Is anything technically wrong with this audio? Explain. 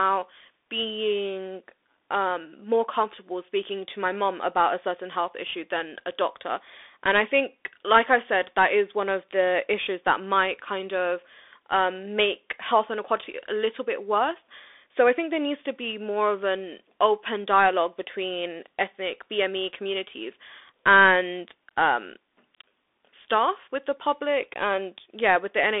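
Yes, the whole clip goes through a Bluetooth CVSD headset codec, squeezing the speech into roughly 300 Hz to 3.6 kHz with nothing above 3.8 kHz. The one-bit adaptive coding, which fits a 64 kbps link, leaves scratchy sibilants and a grainy hiss throughout.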